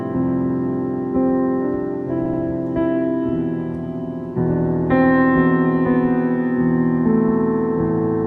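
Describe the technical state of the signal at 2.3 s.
Right at that spot you've got repeated frames, running from about 2.25 to 2.41 s. An 80 ms chunk of the music gets played two extra times, so it stutters in place and the track runs 160 ms longer, which fits a short run of compressed frames being duplicated.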